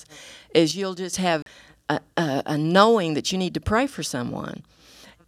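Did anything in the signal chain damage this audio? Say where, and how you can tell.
Yes. Between 0.71 and 1.13 s the speech level drops by about 10 dB and then returns, with each change happening instantly rather than fading. The background noise falls and rises in step with the voice, which points to a sudden gain jump inside the digital processing chain. The likely cause is a gain setting or bit shift applied to the samples with no ramp, so the whole signal steps down at once and steps back up just as abruptly.

At 1.42 to 1.46 s, the speech cuts to dead silence for 39 ms and then resumes on "a a a knowing". A gap this clean, with nothing smeared or concealed across it, fits a Bluetooth stall on the playback link. The likely cause is radio interference delaying packets until the headphones' buffer ran empty. Output halted until the retransmitted audio arrived, and then playback continued from roughly where it had stopped.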